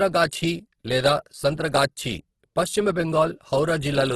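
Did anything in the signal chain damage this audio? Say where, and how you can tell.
Yes, at the codec stage: likely Opus compression at a bitrate that sounds near 12 kbps, making the speech grainy and rough throughout, with nothing above 12.4 kHz.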